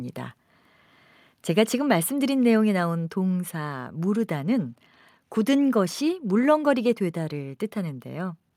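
No technical faults can be heard anywhere in this recording.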